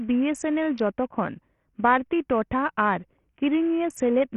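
Throughout, the speech has a hard ceiling at 14.3 kHz, flickering treble and gritty, aliased noise, likely Bluetooth SBC compression starved of bits, consistent with roughly 48 kbps.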